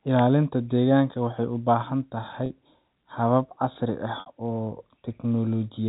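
At 2.46 s and again at 4.2 s, just after "habab casri ah", packet loss with pitch repetition occurs: 40 ms then 60 ms of sound go missing, which fits two and three 20 ms packets. The receiver fills each gap by looping the last pitch period, so the first briefly holds on a buzzy tone before resuming, while the second fades into silence and the speech returns with a short cross-fade, over the narrow telephone band of the G.711 link.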